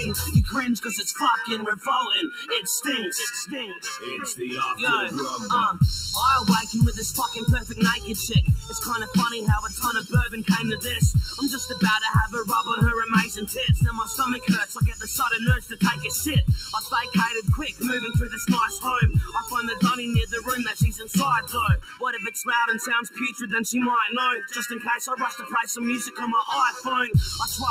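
All the way through, there's channel delay (comb filtering): one side lags by about 0.7 ms, so summing cancels evenly spaced notches from around 700 Hz up, leaving it hollow.

A noise suppressor applied to music or sounds is also running the whole time, treating steady material as noise and swinging the level by roughly 10 dB, so things pump and thin.

You hear the sound cut by the noise suppressor at 1.76–2.51 s, 3.68–4.08, 7.62–11.77, 13.29–17.83, 18.75–19.53, 20.71–22.02, 23.04–23.45 and 24.75–26.86 s. Held and decaying parts sink by about 8 to 14 dB, the deepest near 21 s.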